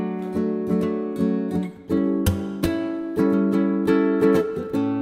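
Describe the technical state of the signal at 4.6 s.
At 4.6 s the signal is intact, with no fault to be heard at that moment.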